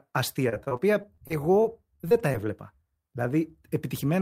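From 0.49 to 2.45 s the speech breaks up with repeated packet loss (robotic sound). About a dozen short holes occur in quick succession, the longest about 39 ms. Each is filled by stretching the sound just before it, so roughly an eighth of that stretch is patched rather than real. The result is choppy speech with pieces missing. Unlike a single dropout, the holes keep recurring at short intervals, giving a repeated stutter.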